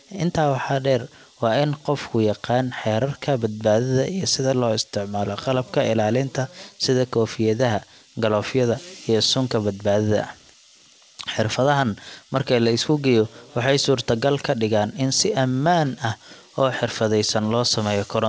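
Nothing goes wrong anywhere in this speech clip; it has simply come over a call connection, and with nothing above 8 kHz the sound points to a wideband codec along the lines of G.722.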